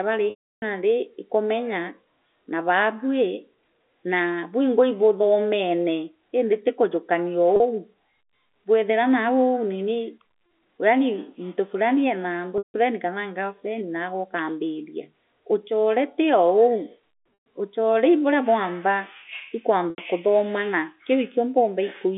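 Buzzy held tones, fading to silence in the longer gaps, come from packet loss with pitch repetition at 0.3–0.62 s (320 ms), 7.56–7.6 s, 12.58–12.74 s, 17.34–17.46 s and 19.9–19.98 s, where the receiver repeats the last pitch period over the narrow telephone-band G.711 audio.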